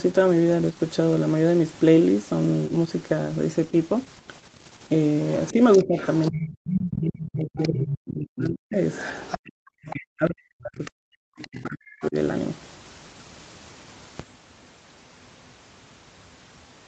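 A speech clip that runs into trouble once a second voice from the far end enters. Between 5.42 and 6.5 s, 7.18 and 7.68 s, 8.92 and 9.96 s, and 10.85 and 12.07 s, a faint extra voice sits under the talker. It is roughly 15 dB down in the first two spots, about 10 dB down in the third and around 20 dB down in the last. This is likely the other side's voice leaking through. A loudspeaker feeds the microphone, and the echo canceller leaves part of that signal behind. Over the same stretch the main talker keeps sinking. From 5.53 to 8.78 s, and again from 9.92 to 12.16 s, the voice dips and breaks up, falling by as much as roughly 40 dB. About three seconds and then two seconds are affected. That is likely speech suppressed in double talk. Both sides speak together, and the canceller cannot tell the near talker from the echo, so it pulls everything down. Between 9.43 and 9.64 s the room sound itself drops out for around 150 ms, by about 40 dB. 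This is background gated by the echo canceller. The loudspeaker is active, so the canceller clamps the microphone hard, then releases it. Throughout, the band stops near 8 kHz, as the call path through Opus would give.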